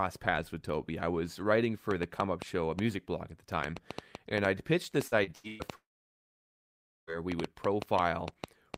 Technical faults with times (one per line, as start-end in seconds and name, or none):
1.91-8.77 train of clicks
5.07-5.62 repeated packet loss (robotic sound)
5.75-7.10 long network dropout